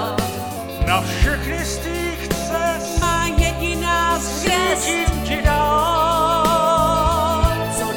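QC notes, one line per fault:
0.57–4.44 s, wrong sample rate: material that fits a 48 kHz recording is being clocked out at 44.1 kHz with no rate conversion, so each second of samples takes longer to play than it took to capture. Speed and pitch drop together by the same ratio, to about 0.92 of normal speed and roughly 1.5 semitones flat, making the sound slower, lower and heavier until the correct rate returns at 4.44 s.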